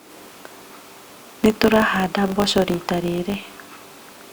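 Throughout the speech, a filter restarted on every block starts each block from silence, leaving a 50 Hz buzz of ticks that swells and fades with speech level, unlike steady mains hum.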